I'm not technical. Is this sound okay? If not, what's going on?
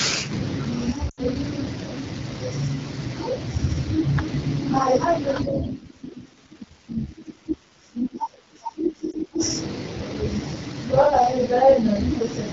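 No, not quite. The whole clip has the rough, raspy edge of the AMR wideband (HD Voice) codec running at one of its lowest settings, so voices lose their clean sound.

From about 1.09 to 1.20 seconds there are lost AMR speech frames: the phone guesses the missing bit, so the sound briefly fades to near silence. A shorter blip happens around 9.12 to 9.15 seconds.

From 5.42 to 9.42 seconds the sound drops away sharply. The likely cause is speech suppressed in double talk, where both people talked at once and the echo canceller turned the voice down.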